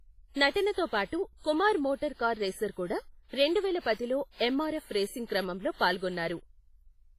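From start to finish the speech carries heavy transform-codec damage: a ringing, washy smear around each sound, with a hiss that swells and recedes alongside the signal, and nothing above 15.4 kHz. This is likely WMA compression at a low bitrate, in the region of 24 kbps. Long transform blocks spread quantisation noise across tens of milliseconds, and quieter spectral lines are zeroed out, which thins the texture between louder components.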